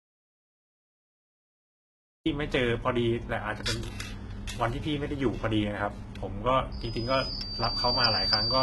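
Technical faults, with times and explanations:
Throughout: HE-AAC compression, likely, with heavy codec damage. Nothing survives above 11.8 kHz, and the treble that remains is rebuilt by copying lower bands upward, so sibilants sound gritty and metallic and harmonics fail to line up. The heaviness fits a bitrate near 16 kbps.
0.00–2.26 s: audio dropout to silence, already under way when the clip begins. The gap is silent with no room tone, the sound of a lost input, likely a disconnected device or failed link, with silence written in place of the speech until it resumes.
6.72–8.62 s: loudspeaker feedback squeal at 4.9 kHz. The microphone picks up its own loudspeaker and the loop gain exceeds one at that frequency. The tone swells over roughly a second to sit about 10 dB above the speech and holds until the end.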